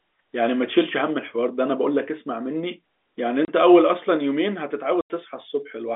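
Packet loss filled with silence appears first at 3.45 s, where the speech drops out for 30 ms, and again from 5.01 to 5.1 s, a 90 ms gap. Chunks of audio never arrived, and the receiver inserted digital silence instead, so the speech stops and resumes abruptly at hard edges. The gaps point to 30 ms packets: one missing at the first dropout, three in a row at the second. The narrow telephone band of the G.711 line can be heard throughout.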